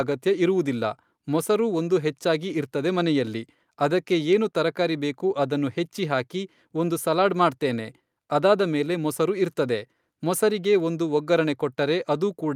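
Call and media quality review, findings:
No audible faults found in the speech recording.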